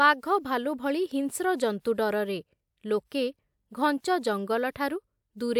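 No technical faults are audible anywhere in the speech recording.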